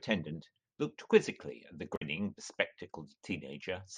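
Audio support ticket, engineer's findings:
Damaged data in a compressed stream, 1.93–2.02 s. Short disruption in the speech, about 80 ms. Component: encoded stream/file. Corrupted frames misread by decoder; sync lost until the next valid frame header.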